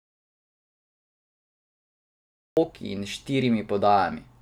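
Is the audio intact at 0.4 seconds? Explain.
No. At 0.4 s the clip sits inside an audio dropout to silence that is already under way when the recording begins and lasts until about 2.57 s, when the speech comes back mid-flow. The input was likely lost, through a disconnected device, a failed link or a mute, while the recorder kept writing silence. What separates this from a natural pause or a noise gate is that the gap is silent with no room tone at all.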